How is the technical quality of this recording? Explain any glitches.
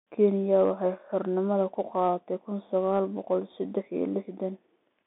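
The quality is poor: the speech sounds boxed-in and telephone-like from start to finish, with nothing above about 3.8 kHz, and the line band runs roughly 200 Hz to 3.6 kHz.

The fault is the Bluetooth CVSD headset codec, throughout. Sibilants turn scratchy, a granular hiss sits under the speech, and loud bright passages distort. The cause is a one-bit up-or-down code whose adaptive step can't follow fast, loud changes, which fits a 64 kbps CVSD link.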